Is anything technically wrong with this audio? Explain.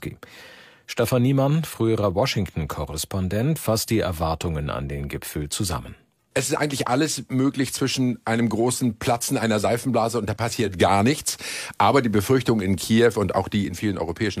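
Yes. Digital radio blending to analogue occurs from 10.61 s to 13.82 s. The receiver lost its digital stream and cross-faded over about 212 ms to the FM broadcast of the same station, then blended back near 13.82 s. In that stretch the level shifts by about 4 dB, and an FM hiss floor appears, sitting roughly 40 dB below the sound, before the clean digital path returns.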